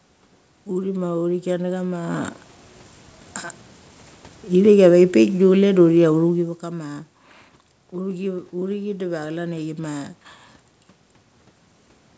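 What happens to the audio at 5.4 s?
At 5.4 s the automatic gain is falling: from 4.49 to 6.41 s the AGC eases its gain down by about 4 dB, so speech and background sink together before "vek kama".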